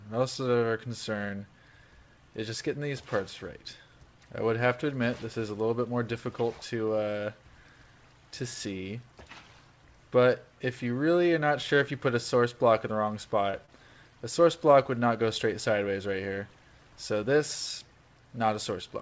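At 13.51 s and 13.66 s, short concealed packet loss occurs. About 20 ms goes missing each time. The receiver extends the preceding sound, leaving brief smears, with nothing above 8 kHz throughout.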